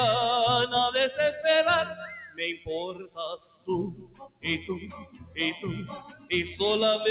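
A noise suppressor applied to music or sounds runs throughout, treating held tones and tails as noise, so level pumps by around 10 dB while attacks pass, unlike a steady gain drop. Sound is cut by the noise suppressor at 1.90–2.06 s (about 7 dB), 2.23–2.40 s (about 12 dB), 2.93–3.18 s (about 18 dB), 3.93–4.45 s (about 18 dB), 4.84–5.38 s (about 13 dB) and 5.99–6.30 s (about 12 dB). These are sinking sustains and clipped decays rather than dropouts, since onsets mostly come through. The band stops at 4 kHz, consistent with G.711 A-law call coding.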